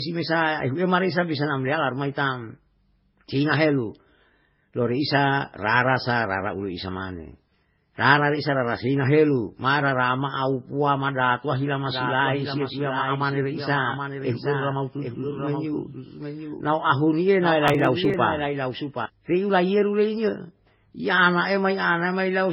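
The clip is speech, and it sounds dull and processed throughout. Nothing reaches above 5.5 kHz. Two kinds of codec damage are heard together: a smeared, warbling grain and a swishy, watery texture on top. That points to transcoding between lossy codecs, likely a very low-rate MP3 re-encoded as Vorbis. The second encoder spent its few bits on the first one's artefacts and added its own. The lowest cut-off survived the chain. From 11.86 s to 19.06 s, just before "piu laiyeru", a doubled audio track appears. A second full-band copy of the speech trails the original by about 0.7 s. It is about 5 dB quieter. It has no decay or room colour, so it is not an echo. It starts and stops abruptly. The likely cause is the same audio being captured twice, once through a slower path, or two copies left out of step in an edit. From 17.68 s to 18.14 s there is processor overload crackle. A short burst of gritty tearing rides on the sound and then stops. 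The processor missed its deadline for around ten buffers. Each missed buffer was skipped, leaving a tiny hard-edged gap. The gaps fit very short buffers of under a millisecond.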